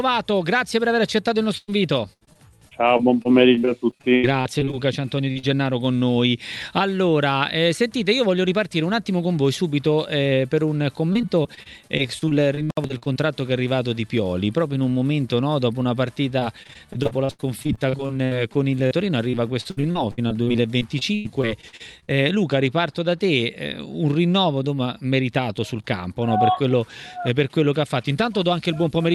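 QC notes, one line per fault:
1.57–1.72 s, burst of packet loss: about 100 ms of audio never arrives. The receiver stretches the last sound and fades it down, ending in roughly 30 ms of near-silence. Playback then resumes further on, so the sound jumps past the missing stretch.
2.13–4.79 s, 11.13–13.18 s, 16.40–18.93 s and 19.31–22.10 s, repeated packet loss (robotic sound): each stretch holds 18 to 20 separate gaps. About a fifth of each stretch is synthetic continuation, with the longest gaps at 79, 46, 79 and 96 ms. Holes arriving this close together make the sound choppy and broken.
5.31–5.37 s and 5.39–5.45 s, short concealed packet loss: two holes of about 40 ms each, barely 20 ms apart. Each is patched by extending the preceding sound and blending back into the real signal. The result is a quick double smear or wobble, and any brief transient there can disappear.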